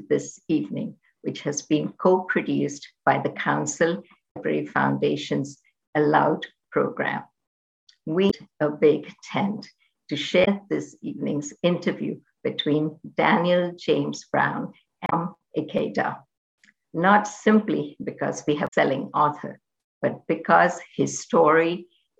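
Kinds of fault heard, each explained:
Damaged data in a compressed stream: corrupted bytes inside the encoded audio make the decoder misread a frame and lose sync until it finds the next valid header, giving brief glitches at 4.27–4.37, 8.27–8.34, 10.41–10.48, 15.06–15.13 and 18.64–18.74 s, each roughly 70 to 95 ms.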